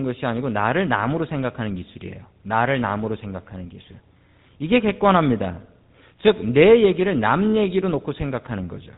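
The speech has passed through the GSM full-rate codec, consistent with 13 kbps, which rebuilds voices from sparse pulse excitation and drops everything above 4 kHz, leaving a plainly audible buzzy, gravelly roughness throughout.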